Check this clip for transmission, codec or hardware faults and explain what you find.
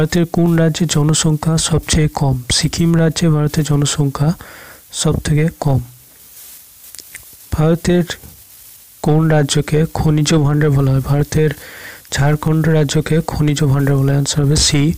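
One fault is present: a regular train of clicks from 0.46 s to 14.37 s, about twenty in all, recurring every 0.63 s. These are likely clock drift buffer slips. Two devices with clocks differing by roughly 500 ppm let the buffer between them creep until a block of around 15 samples is dropped or repeated. Packet loss produces gaps at irregular moments. These ticks keep a metronome-steady spacing throughout.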